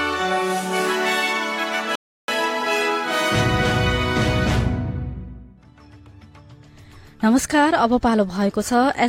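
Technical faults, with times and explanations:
1.95–2.28 s, rebuffering stall: the sound drops to silence for about 0.33 s, then picks up exactly where it broke off. The player exhausted its downloaded audio and waited for more data, so nothing is skipped but the gap lengthens the clip.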